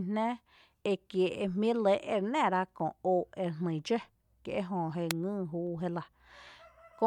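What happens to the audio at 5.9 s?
Nothing goes wrong at 5.9 s; the speech continues intact through that moment.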